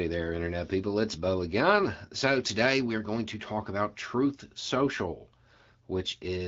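No faults heard; the speech passes over AMR wideband (HD Voice) at 12.65 kbit/s, a rate at which the codec leaves only light coding damage.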